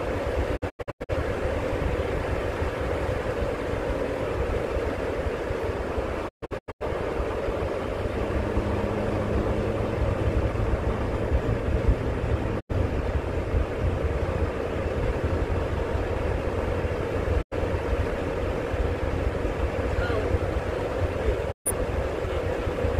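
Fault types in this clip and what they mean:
digital broadcast dropout: receiver mutes on failed frames, fading in about 20 ms to silence; five losses, the two longest scattered as short holes over half a second.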